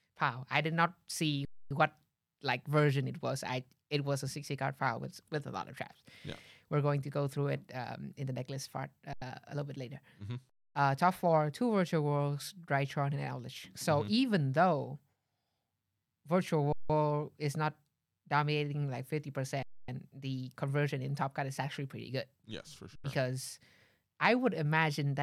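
Six underruns with held sample interrupt the speech at 1.45–1.71 s (after "I did not see"), 9.13–9.22 s (between "in the necklace part" and "a little bit later"), 10.50–10.75 s, 16.73–16.90 s (before "is not dominating like"), 19.63–19.88 s and 22.96–23.04 s. Each time the output buffer empties, the converter freezes on its last value, and the sound drops to a flat silence with little or no click for 85, 171 or 256 ms. Playback then resumes exactly where it stopped, so each restart is soft. The gap lengths fit whole 4096-sample blocks at 48 kHz.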